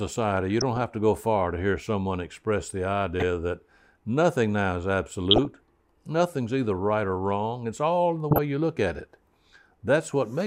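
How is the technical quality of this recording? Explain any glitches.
The speech is marred by four short bursts of DAB burbling, at 0.51 to 0.82 s, 3.20 to 3.24 s, 5.31 to 5.45 s and 8.31 to 8.38 s. Weak reception lets bit errors, a few tenths of a percent, slip past error correction into the MP2 audio data. Corrupted samples put short blips of noise into single sub-bands, and corrupted scale factors make sub-bands leap in level for up to a frame, laid over the voice.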